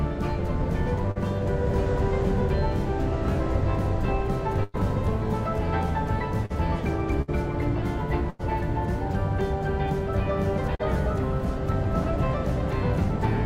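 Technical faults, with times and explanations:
1.11–1.17 s, 6.46–6.52 s and 10.75–10.81 s: short concealed packet loss. About 40 ms went missing each time. The receiver extended the preceding sound to cover the gap, giving a brief smear or wobble. A spectrogram shows short stretches of repeated, blurred harmonics, and the waveform shows slightly too-regular cycles.
4.63–4.76 s, 7.22–7.30 s and 8.30–8.41 s: burst of packet loss. About 100, 60 and 100 ms were lost. The receiver stretched the last sound across each gap and faded it, giving a held buzz or fading hiss. The audio then jumps ahead. A spectrogram shows smeared, frozen bands, and the waveform shows a repetitive, decaying envelope.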